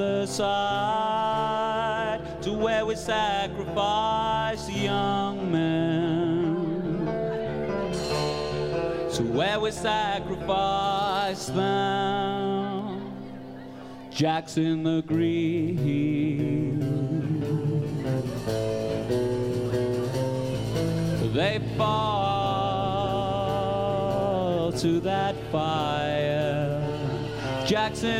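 No technical faults can be heard anywhere in the audio.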